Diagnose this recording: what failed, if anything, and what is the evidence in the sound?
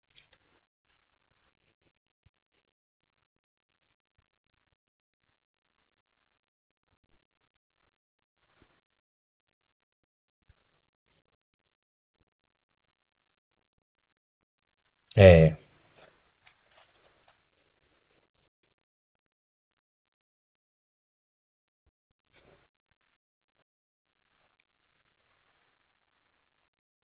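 Nothing failed; the narrowband call path sounds as intended.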